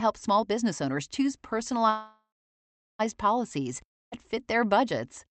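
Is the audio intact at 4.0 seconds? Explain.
No. From 3.88 to 4.14 s the sound smears into a fading buzz, then near-silence, resuming at "fit their budgets" minus about 240 ms: likely a long network dropout.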